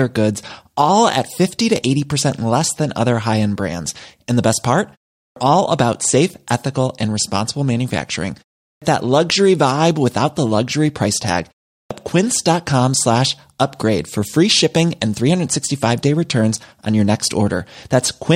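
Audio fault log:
5.24 s, 8.71 s and 11.79 s, clipped start after a pause: each time the speech returns from a short gap of about 0.35 s, roughly 0.11 to 0.12 s of it is gone. That's after "the best part", after "ethical and responsible manufacturing" and after "the luxury price tag". The output device drops into sleep during the silence and needs that long to wake back up, so the opening sounds get swallowed and the speech snaps in abruptly.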